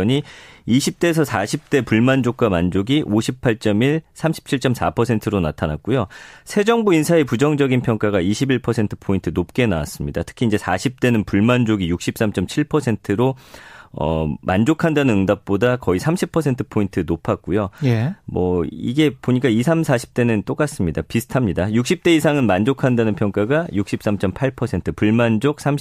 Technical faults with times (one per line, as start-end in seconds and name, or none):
none